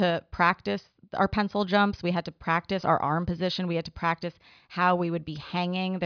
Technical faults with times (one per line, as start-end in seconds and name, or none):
none